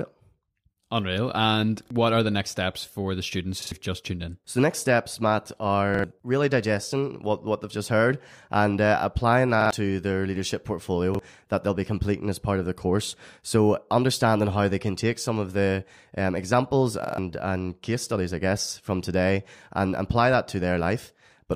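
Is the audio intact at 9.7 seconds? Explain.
No. A repeated buffer runs from 9.61 to 9.71 s, between "heard and uh applying" and "to their leadership". New audio arrived late, so the device replayed its last block instead of going silent. That block is about 46 ms long, which fits a 2048-sample buffer. It plays two extra times, with a hard join at each repeat. The result is a brief stutter. About a tenth of a second of real audio is lost.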